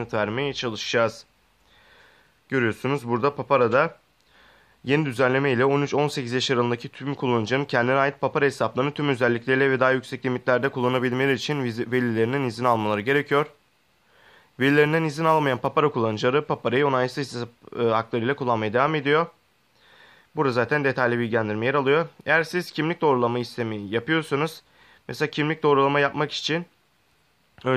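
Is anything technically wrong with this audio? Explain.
Yes. From 10.61 to 15.67 s there is sample clock jitter: the converter's timing wanders by a few microseconds, so samples land slightly off time, an error that grows with the waveform's slope. It is heard as a hiss or roughness roughly 35 dB below the sound, rising on louder and brighter passages.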